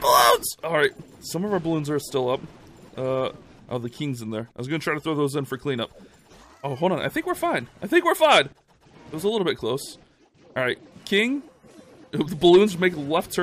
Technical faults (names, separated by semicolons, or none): none